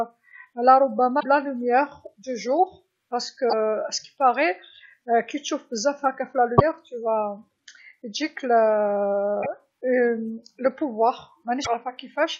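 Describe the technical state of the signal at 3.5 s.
Right there you've got damaged data in the compressed stream, from 3.46 to 3.53 s: corrupted frames throw the decoder off sync, leaving a brief glitch.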